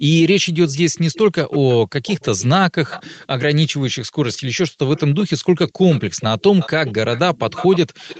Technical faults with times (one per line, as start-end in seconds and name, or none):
0.69-1.74 echo leak
2.05-2.46 echo leak
2.89-3.26 echo leak
4.96-5.26 echo leak
5.68-8.19 echo leak
6.07-6.18 background gated by the echo canceller